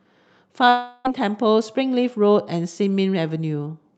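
From 0.69 to 1.07 s, a likely long network dropout stops the audio; the receiver fills in with a fading buzz or hiss, and 0.36 s of speech vanishes.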